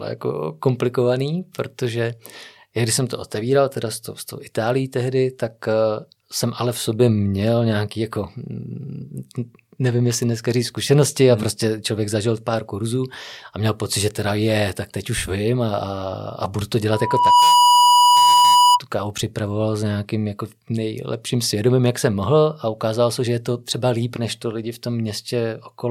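Loudspeaker feedback squeal runs from 16.91 to 18.80 s: the microphone is picking up its own loudspeaker, and around 979 Hz the loop gain passes unity. That single tone swells over roughly half a second into a piercing squeal, ending up about 10 dB above the speech.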